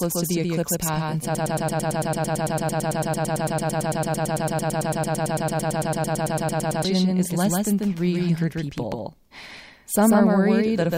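A speech recording carries a doubled audio track for its whole length: a second, full-band copy at about the same level trails the original by roughly 150 ms, dry and with no room colour, most likely from a slower second capture path mixed back in. From 1.35 s to 6.85 s, right after "the eclipse path in", a broken-record loop repeats a 0.11 s fragment back to back roughly fifty times, likely a stalled player or stream resending its last buffer. The audio for that span is lost, and speech resumes at "is less than".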